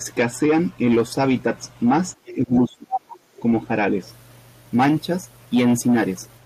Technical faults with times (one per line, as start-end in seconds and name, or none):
2.26-2.36 other side's voice leaking through
2.34-3.23 speech suppressed in double talk